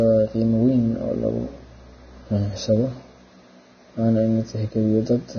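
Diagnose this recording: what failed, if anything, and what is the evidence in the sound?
The codec stage is the likely culprit: heavy Vorbis compression throughout the speech. Nothing survives above 6.5 kHz, and the remaining treble sounds hissy and grainy, its fine detail swapped for coarsely quantised noise over the spectral floor. That points to a bitrate near 18 kbps.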